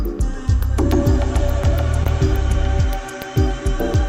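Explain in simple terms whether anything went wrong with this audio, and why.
Around 2.03 to 2.07 s there's a short concealed packet loss. About 20 ms of audio never arrived in time, so the receiver patched the gap by stretching out the sound just before it, then blended back into the real thing. You hear a quick smear or wobble there.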